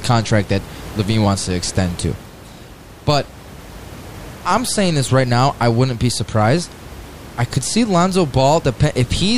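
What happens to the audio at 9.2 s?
At 9.2 s the audio is intact, with only the room's own background noise sitting about 19 dB below the speech.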